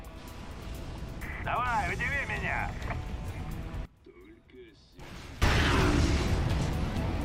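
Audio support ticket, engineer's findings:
Sudden collapse in level, about 21 dB down, 3.85 to 5.42 s; remaining sound faint. Likely one channel inverted, centred content cancelling in mono sum. Waveform: abrupt amplitude drop over that span; spectrogram: all bands nearly empty, faint residue.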